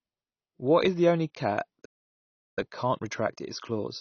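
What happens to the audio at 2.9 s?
From 2.58 s, right after "is the only cat", time-compressed catch-up hurries the speech about 1.15 times at normal pitch through 4.00 s. Small cross-faded cuts show as tighter, regularly spliced waveform envelopes. Underneath, a dull, smeared, fizzy texture is likely AAC compression at a low bitrate, appearing as a hard spectrogram ceiling.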